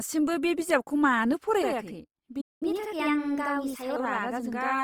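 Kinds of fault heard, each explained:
Opus compression: throughout the speech there's a grainy, rough texture that's plainly audible, the kind you get when a codec fills bands with folded or noisy content instead of leaving holes. It sounds like likely Opus in its music mode at around 24 kbps, with full bandwidth kept.
Channel delay (doubling): from 1.62 s to the end, one channel runs about 85 ms behind the other, and once they're summed you hear a second copy at equal level, like a slap echo. That gap fits a 4096-sample buffer.
Playback stall: at 2.41 s the audio just drops out for about 200 ms, cut off mid-flow, then picks up again at 2.63 s. That's the sound of a player likely starved of data or blocked for a moment.
Catch-up at higher speed: right after the gap, from 2.63 s to 3.96 s, everything runs 1.15 times fast, with pitch up about two semitones, as the backlog gets resampled to win back lost time, then it settles back to normal.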